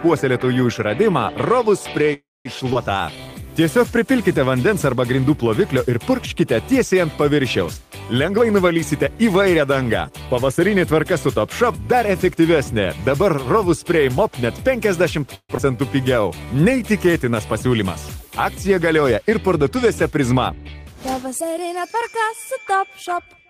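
At 2.13 to 2.47 s the sound stalls into a fading buzz, silent for about 210 ms of its 0.34 s, then resumes unbroken. This is a call audio freeze, likely from delayed packets draining the jitter buffer. At 2.73 to 2.77 s the audio lurches forward with barely a gap, losing roughly 70 ms. This is a skip ahead, where a stretch was dropped and its two sides were joined almost directly. From 2.97 to 3.36 s the sound drags at 85% speed with unchanged pitch, about 64 ms longer. This jitter buffer slow-down came from repeated pitch periods rebuilding the reserve. Between 8.29 and 12.36 s the audio hurries at 107% speed, same pitch, shedding roughly 300 ms. This jitter buffer speed-up trimmed short pieces to cut excess delay. A second call audio freeze at 15.35 to 15.51 s gives a brief buzz with about 50 ms of silence. Another skip ahead at 15.57 to 15.60 s jumps past roughly 100 ms. A further slow-down, 16.01 to 17.68 s, runs at 94% and adds 115 ms. 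A final speed-up, 19.65 to 21.96 s, runs at 106% and removes roughly 150 ms.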